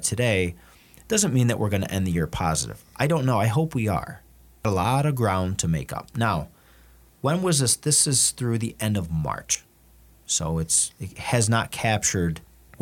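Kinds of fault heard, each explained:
Audio missing between chunks: the speech jumps abruptly at 4.65 s and again at 9.55 s, just after "through the end of", each time losing roughly a tenth of a second, with both sides joined and no silence between. The five-second spacing suggests a recorder likely dropping a short stretch as each chunk closes and the next opens. The waveform shows a sudden discontinuity rather than a pause, and the spectrogram shows harmonics jumping at a vertical seam.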